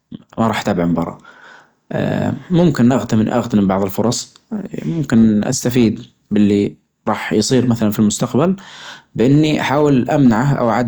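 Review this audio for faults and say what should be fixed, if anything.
Brief crackles ride on the loudest syllables throughout the speech, a gritty edge rather than a constant fuzz. This is hard clipping: the recording chain was driven about 2 dB past what it could pass, so the tallest peaks, only around half a percent of the samples, were sliced flat. Those squared-off tops add harmonics high in the spectrum, which is the crackle heard on peaks. Setting the input gain lower, or placing a limiter before the overloaded stage, would prevent it.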